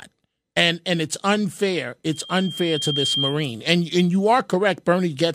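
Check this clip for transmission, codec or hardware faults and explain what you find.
One fault is present. After "and and it's unfair", from 2.12 to 3.42 s, a 3.2 kHz tone swells over about a second to roughly speech level. This is loudspeaker feedback squeal: the microphone re-amplifies its own loudspeaker with loop gain above one.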